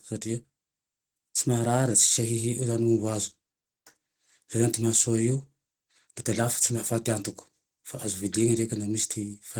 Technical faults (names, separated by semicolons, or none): Opus compression